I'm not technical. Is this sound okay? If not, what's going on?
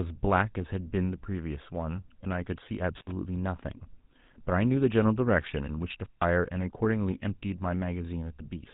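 No. The whole recording has passed through the GSM full-rate codec, the original mobile-phone voice encoder. It rebuilds speech from a simplified model driven by pulses, which gives the voice a buzzy, gravelly edge, and it removes everything above about 3.8 kHz, so the sound is dull and phone-like.

There is also an intermittent contact between 6.03 and 6.24 s, the kind of fault a loose plug or cable causes. The connection drops for about 0.15 s, so the sound briefly cuts out with a crackle at each edge.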